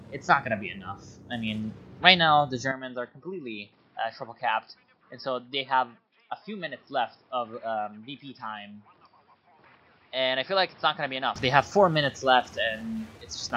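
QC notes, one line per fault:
2.71–11.36 s, input switched to a poorer device: sound abruptly dulls with nothing above 5.4 kHz, drops about 5 dB and gains faint new background noise, likely from a narrower-band microphone.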